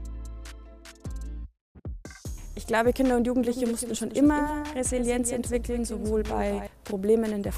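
From 3.41 to 6.67 s a doubled audio track appears: a dry copy trails roughly 200 ms behind, about 10 dB quieter, likely from a second, slower capture path.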